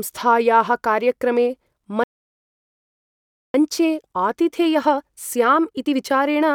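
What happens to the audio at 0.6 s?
Nothing goes wrong at 0.6 s; the speech runs through that moment intact, with no dropout, click or distortion to be heard.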